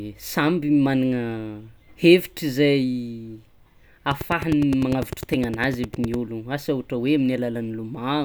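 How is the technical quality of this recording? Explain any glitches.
The recording has one clear glitch: a train of clicks in the middle of the speech.

From 4.11 s to 6.15 s, a steady ticking sits over the speech. It stops just before "ologno asa ohatra hoe". The clicks repeat at about 9.9 per second with regular spacing, roughly twenty in all. Each is much the same sharp pop, around 10 dB louder than the speech, so it cuts through gaps too. The likely cause is electrical interference or a faulty connection or power supply injecting repeated pulses.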